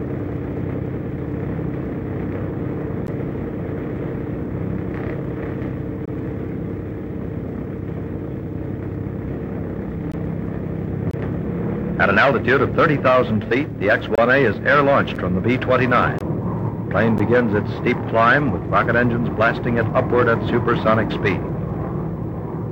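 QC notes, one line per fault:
3.07, 6.05, 10.12, 11.11, 14.15, 15.15, 16.19, 17.18 s: gap between stream segments. Hard-edged silences of 9 to 26 ms fall on one-second segment joins where timestamps leave a gap, so silence is inserted. Unlike a dropout, no sound is lost; it resumes exactly where it stopped.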